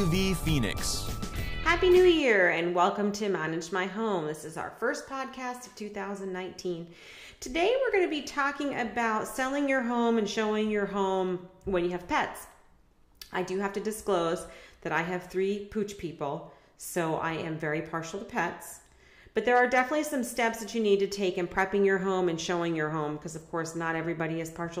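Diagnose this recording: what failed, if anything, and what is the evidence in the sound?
Listening closely, nothing in the recording stood out as a failure at any stage.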